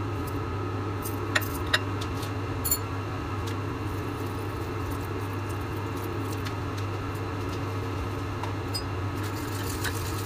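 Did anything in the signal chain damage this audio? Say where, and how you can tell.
No, nothing along the chain has audibly damaged this audio, and no stage leaves a mark anywhere in the clip.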